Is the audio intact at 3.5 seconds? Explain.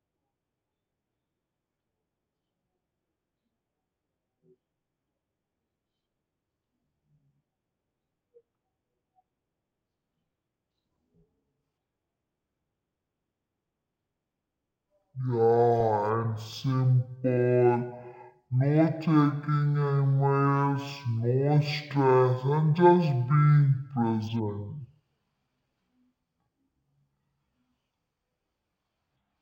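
No, at 3.5 seconds the speech is caught in a stereo read as mono fault running through the whole clip: left and right samples are taken one after another as a single channel, so everything plays at half speed, an octave low, with a faint mirrored copy up top.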